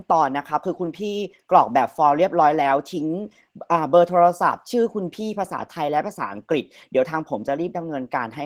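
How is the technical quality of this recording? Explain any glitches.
The technical quality is limited by one fault: audible Opus voice compression running through the whole speech clip.

Opus voice compression is present from start to finish. The coder uses its hybrid mode. Linear prediction handles the band below 8 kHz, and a transform layer adds the content above it up to full bandwidth. The damage is plainly audible and fits a rate of roughly 16 kbps. At that rate the excitation is coded coarsely, so the speech sounds hoarse and slightly robotic. On a spectrogram, the harmonics below 8 kHz look smeared and grainy. The region above 8 kHz appears patchy and blocky, changing in steps that fit 20 ms frames.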